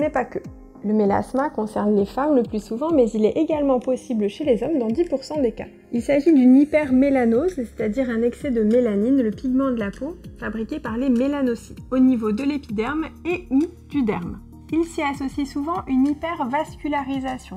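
From start to finish the channels are drifting apart. The left and right sides were clocked by separate devices that disagree by roughly 50 ppm, so the offset between them grows steadily and reaches about a millisecond by the end. Summed to mono, the sound takes on a slow flanging sweep. On a spectrogram, comb notches glide downward and crowd closer together as the delay lengthens.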